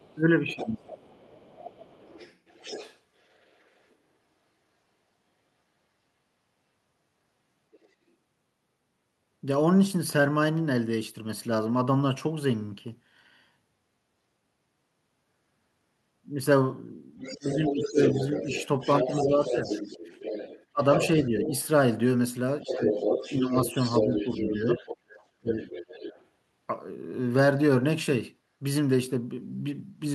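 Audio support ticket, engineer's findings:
Second voice behind the talker at 0.0–3.94 s (about 20 dB down), 7.72–7.88 s (about 35 dB down), 17.19–21.67 s and 22.67–26.25 s (about 5 dB down). Other side's voice leaking through, likely residual loudspeaker echo the canceller missed.

Talker's level dips while the far side speaks at 0.55–1.1, 17.3–19.69, 20.72–21.53 and 22.62–25.57 s, by about 10 to 20 dB. Speech suppressed in double talk, likely the echo canceller attenuating both voices.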